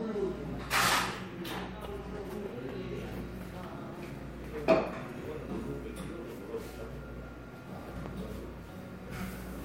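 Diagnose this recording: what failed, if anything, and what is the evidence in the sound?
A burst of processor overload crackle from 4.10 to 4.21 s points to a failure at the driver or buffer stage. The processor missed a handful of buffer deadlines, each buffer only a few milliseconds long, and every miss was filled with silence, so the sound is chopped into a brief gritty tearing. On the waveform this shows as short flat gaps with hard vertical edges. On a spectrogram the same span shows thin broadband vertical streaks.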